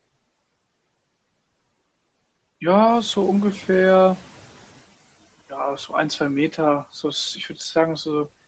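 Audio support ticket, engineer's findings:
Noise suppressor catching up, 2.88 to 4.84 s. Room noise jumps about 12 dB around 3 s and comes through with less reduction, then sinks about 11 dB over roughly 2 s as the noise estimate catches up. Suppressor-side, adaptation lag. Nothing above 8 kHz, which fits a wideband call codec like Opus at around 24 kbps.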